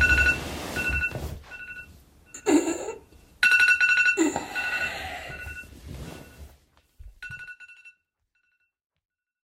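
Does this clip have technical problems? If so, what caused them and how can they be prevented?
No, there are no technical problems in this clip. From roughly 6 s the level tapers off smoothly to silence at the end, as a deliberate fade-out would, with no click or abrupt edge.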